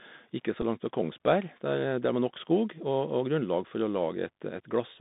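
Across the whole clip, the Bluetooth CVSD headset codec's one-bit slope coding passes only 150 Hz to 3.7 kHz, giving scratchy sibilants, granular hiss and a spectrogram blank above.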